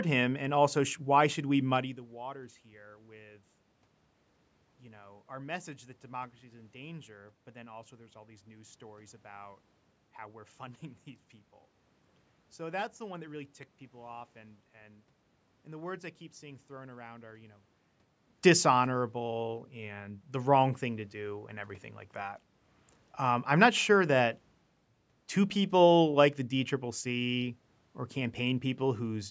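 Speech, with no technical faults to be heard.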